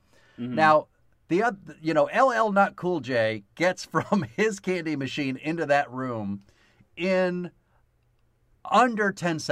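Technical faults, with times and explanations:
Nothing technical stands out in this speech recording; there's no fault to point to anywhere along the way.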